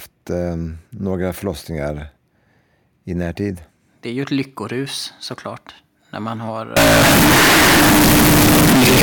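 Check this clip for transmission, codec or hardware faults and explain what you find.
One fault appears near the end of this speech. From 6.77 s to 9.02 s the audio turns suddenly loud, harsh and square-edged, with background noise as loud as the speech, though pitch stays followable. This is likely float read as integer: 32-bit float samples interpreted as 32-bit integers.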